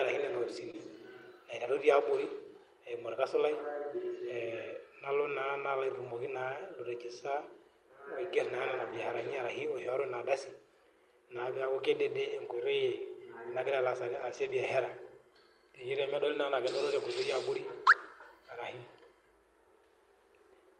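At 0.71 to 0.75 s, about 20 ms of the call arrives too late for the decoder. This is short concealed packet loss: the receiver extends the preceding speech to cover the hole and then crossfades back, leaving a brief smear or wobble.

Later, lost packets are rebuilt from error correction at 8.77–8.95, 9.77–9.87, 12.27–12.33, 14.13–14.51 and 17.17–17.23 s. The decoder plays the low-bitrate backup copies carried in the following packets, so nothing drops out, but those stretches sound rougher and noisier. The longest is at 14.13 s, where about 200 ms is rebuilt.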